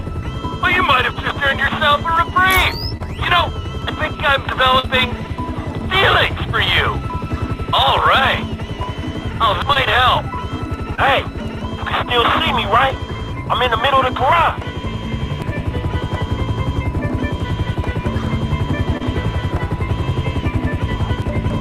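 At 2.97, 4.79, 9.73, 10.95 and 18.97 s, short concealed packet loss leaves brief smeared, wobbling fills of 20 to 40 ms, where late or lost packets were replaced by extrapolated sound and then crossfaded back into the real signal. At 3.82, 9.62, 15.42 and 21.22 s, audio missing between chunks produces abrupt skips, each dropping about a fifth of a second with the edges butted together. The regular 6.0 s spacing points to a likely chunk-boundary gap in the recording or processing chain.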